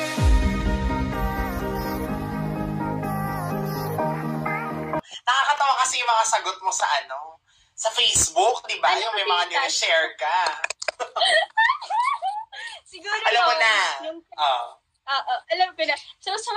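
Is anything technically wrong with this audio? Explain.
Yes. Between 5.56 and 5.6 s there is a chunks-out-of-order fault. A 20 ms chunk arrived one chunk late and plays after the chunk that should follow it, so two 20 ms pieces are swapped. Nothing is missing, but the wrong order leaves three hard joins, heard as a brief jumbled flicker. On a waveform, abrupt discontinuities appear at those joins. A spectrogram shows thin vertical broadband lines there, with a momentary mismatch in the pattern between them.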